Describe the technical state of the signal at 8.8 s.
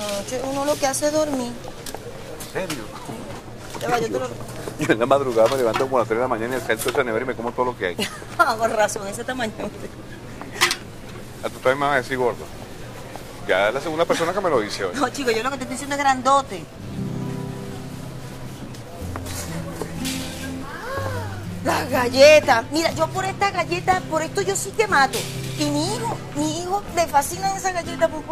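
At 8.80 s the stream has likely lost a fraction of a millisecond of dropped samples, so the waveform jumps straight from one value to a later one. Far too brief to remove any sound, the gap is heard as a single sharp click.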